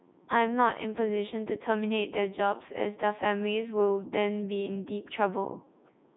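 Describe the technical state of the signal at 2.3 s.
At 2.3 s the speech is coming through the Codec 2 vocoder, which affects the whole clip. Only pitch, voicing, energy and a spectral envelope survive. Sine-wave resynthesis makes it robotic and buzzy. The sound, consistent with 3.2 kbit/s, stops above 3.8 kHz.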